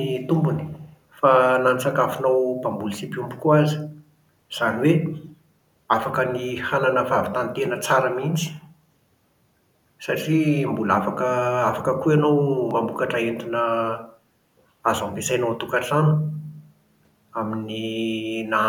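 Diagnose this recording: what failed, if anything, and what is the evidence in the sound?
Call processing, likely an echo leak: from 0.62 to 0.88 s a faint copy of the speech trails about 280 ms behind, where the far end's canceller missed some loudspeaker pickup.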